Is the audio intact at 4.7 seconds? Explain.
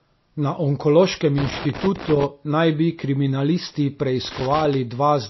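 No. From 4.25 to 4.74 s, just after "naj bi kriminalisti", a loose connector crackle breaks in: a worn or dirty contact making and breaking as it shifts, chopping the signal, heard as an irregular burst of scratchy crackle. Underneath it, the whole clip sounds watery and swirly, with nothing above 5.8 kHz and smeared attacks. This is likely MP3 compression at a bitrate around 24 kbps, where the encoder cuts the treble and lets weak frequency components flicker between frames.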